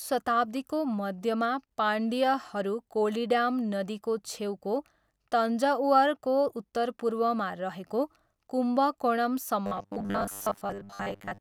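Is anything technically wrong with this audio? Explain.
Yes. From 9.66 to 11.40 s the speech turns into robotic sound from repeated short buffers: a rigid, metallic buzz at 100 Hz that only loosely tracks the words. The likely cause is audio arriving too seldom, with playback looping a 10 ms fragment for most of that stretch while the real audio is skipped.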